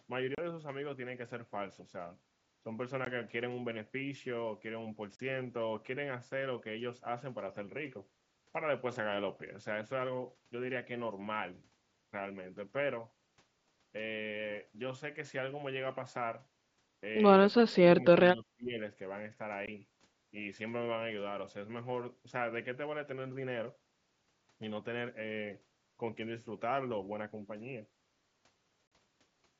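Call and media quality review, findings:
Unconcealed Bluetooth headset packet loss: hard-edged silent gaps at 0.35–0.38 s (30 ms), 3.05 s (15 ms), 5.16–5.20 s (37.5 ms), 19.66 s (15 ms) and 28.87–28.92 s (45 ms). Headset-to-phone link dropped voice frames with no concealment, so dead air replaces audio. The link runs the mSBC wideband codec, with audio up to 8 kHz and light graininess on loud passages.

Speech suppressed in double talk: level dips at 17.64–17.82 s (about 30 dB deep), 18.03–18.13 s (about 5 dB) and 18.33–18.79 s (about 20 dB), roughly half a second affected in total. Likely the echo canceller mistaking near and far talk, attenuating both.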